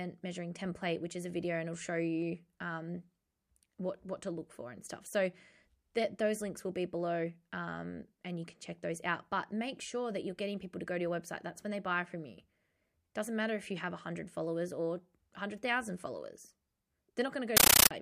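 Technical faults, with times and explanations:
17.57 to 17.91 s, compressed stream played as audio: the speech gives way to loud, chattering static. Bursts about 13.3 ms long repeat 31.25 times a second, which fits undecoded AC-3 data at 640 kbps taken as ordinary samples, each frame heard as noise followed by silent padding.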